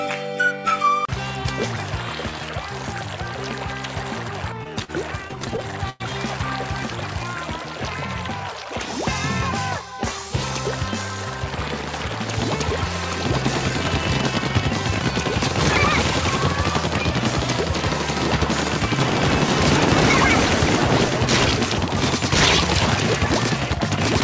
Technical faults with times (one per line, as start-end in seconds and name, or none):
4.84-4.90 short stall from a late packet
5.28-6.02 repeated stalls (stutter)